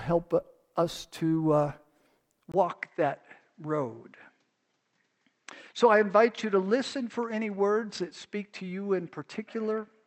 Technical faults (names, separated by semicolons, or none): input switched to a poorer device